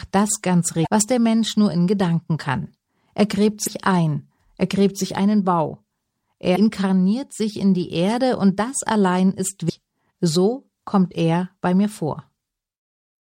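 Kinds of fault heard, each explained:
Damaged data in a compressed stream: Parts of the coded speech stream are corrupt, so the decoder misreads those frames, loses its place and hunts for the next valid frame header. Each hit is a brief chirp, squawk, click or short hole about 45 ms long. They fall at 0.83 s, after "das ganz"; at 3.65 s, just before "ein er gräbt sich"; at 6.52 s; and at 9.66 s, after "und das allein ist". The four are spaced roughly three seconds apart.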